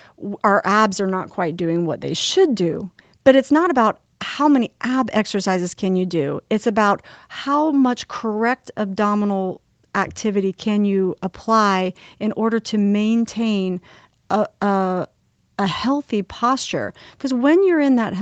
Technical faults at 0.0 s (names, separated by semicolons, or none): none